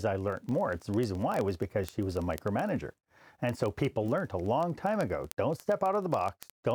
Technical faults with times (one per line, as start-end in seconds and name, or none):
0.11-6.73 word clock ticks